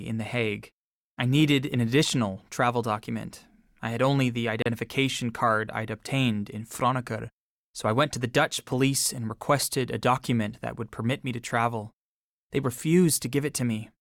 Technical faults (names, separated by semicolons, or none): Bluetooth stall